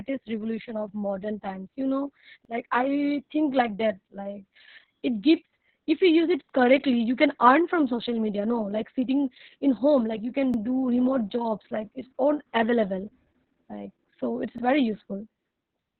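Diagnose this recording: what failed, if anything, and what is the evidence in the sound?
Opus voice compression, throughout the clip, comes from the codec stage. The speech is confined to a narrow band topping out near 4 kHz, which makes it dull and muffled, with a hoarse, slightly robotic grain. That fits SILK-only coding at a very low rate, around 6 kbps, probably in long 60 ms frames. At that rate the linear-prediction coder quantises the excitation so coarsely that the natural voicing texture turns hoarse and robotic.

Overlapping chunks show up as short stutters at regular 4 s intervals, pointing to the buffer or streaming stage. The stutters fall at 2.45–2.50 s, right after "modern times you know" and before "like i think like", at 6.50–6.54 s, at 10.54–10.58 s after "home like you can", and at 14.58–14.63 s after "like so it's". Each new 4 s chunk begins 44 ms before the previous one ended, so that slice plays twice at every join.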